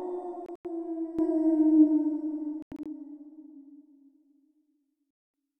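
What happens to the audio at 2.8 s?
Around 2.8 s the audio sits inside a Bluetooth dropout running from 2.62 to 2.86 s. Silent holes total about 139 ms across that 232 ms stretch, the longest lasting 93 ms. The pattern likely comes from several packets missing their delivery deadline, and the sound resumes afterwards as though it had kept playing.

The passage is also under a sudden gain jump that began at 1.19 s and runs to the end. Sound and background noise step up together by about 13 dB, with no ramp. The likely cause is a gain setting or bit shift applied from one sample to the next.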